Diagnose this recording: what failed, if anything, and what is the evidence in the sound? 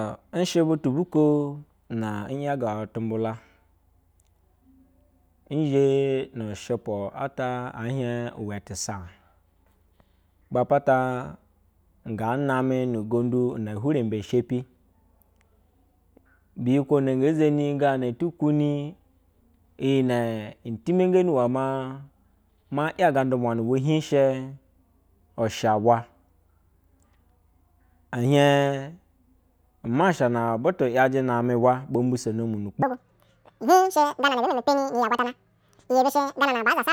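From 32.82 s to the end, the speech suddenly runs at twice its speed and jumps a full octave higher, 12 semitones. This is audio read two samples at a time (double speed), a sample-format conversion fault. The reader treated each pair of samples as one frame, as if the stream were stereo or twice as wide. It took in two samples per output step, so time compressed by half.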